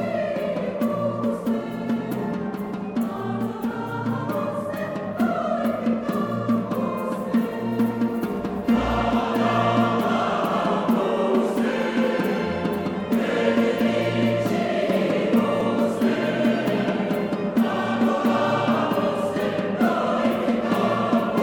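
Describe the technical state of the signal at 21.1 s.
At 21.1 s the signal is intact, with no dropout, distortion, glitch or other technical fault to be heard at that moment.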